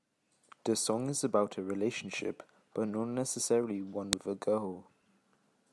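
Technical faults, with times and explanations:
4.13 s, file header played as audio: a second WAV piece was joined onto the first without its header being stripped, so the few dozen bytes of file metadata went out as if they were sound samples. Those values bear no relation to the speech waveform, so they produce one sharp, loud click right at the join, between "but not necessarily one" and "with a", regardless of what the speech is doing at that instant.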